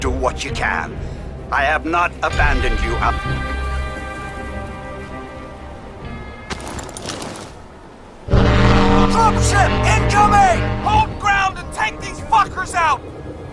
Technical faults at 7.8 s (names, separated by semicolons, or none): none